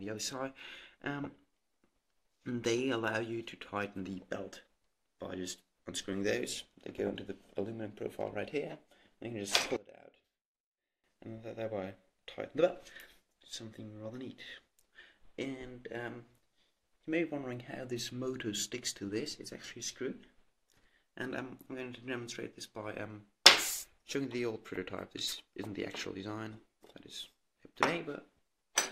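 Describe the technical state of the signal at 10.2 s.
At 10.2 s the sound collapses to a faint remnant, about 22 dB down, from 9.76 to 11.04 s. The likely cause is one channel inverted: with one side's polarity reversed, the content common to both channels cancels when summed to mono, leaving only their small difference.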